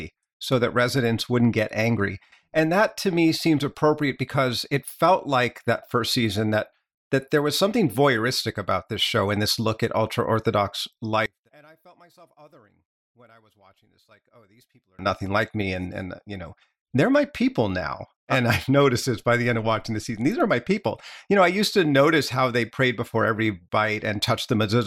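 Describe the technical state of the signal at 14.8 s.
One channel inverted, 11.26 to 14.99 s, after "look at ultra orthodox" and before "nothing like me and". The speech falls about 32 dB to a faint residue, likely because one channel's polarity is reversed, so the centred voice cancels in the mono sum.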